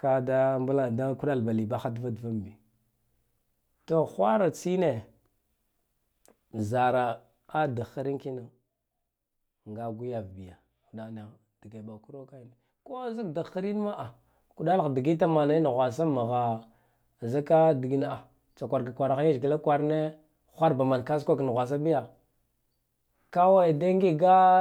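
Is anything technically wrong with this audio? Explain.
Yes. Two level moves in this speech are accompanied by zipper noise, a fine ticking or buzzing grit riding on the voice while the level shifts. From 7.97 to 8.58 s the level drops by about 10 dB with roughly thirty ticks a second, and from 13.03 to 13.87 s it rises by about 10 dB with roughly twenty a second. Both ramps were applied as a series of unsmoothed gain jumps rather than a continuous fade, so every jump leaves a tiny click.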